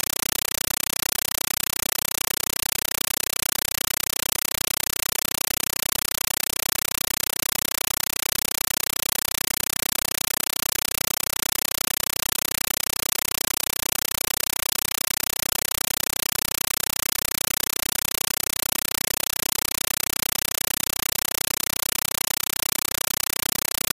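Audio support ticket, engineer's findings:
Compressed stream played as audio, throughout: loud chattering static, no programme sound. Undecoded AC-3 bitstream fed as PCM. Waveform shows 8.0 ms noise bursts then flat padding, repeating 31.25 times a second.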